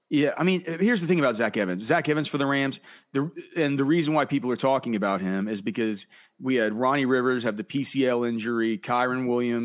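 No technical faults can be heard anywhere in the recording. Nothing interrupts or alters the sound at any point along the way.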